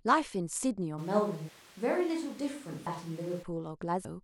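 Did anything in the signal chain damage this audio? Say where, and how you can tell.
Yes. At 1.0 s the sound turns hollow and roomy all at once, with thinner bass. It stays that way until 3.41 s, then snaps back. The level barely changes, but room noise rises to about 25 dB below the speech. This is a switch to a distant microphone at the capture stage. The likely cause is that the close microphone's feed dropped out and a farther microphone took over. That far microphone hears more of the room.

There are also compressed frames skipped at the codec or storage stage. At 2.86 s the audio jumps ahead by roughly 200 ms. At 4.05 s it jumps by roughly 150 ms. The jumps fit a 32 ms frame, which points to about seven and about five whole frames missing or rejected by the decoder.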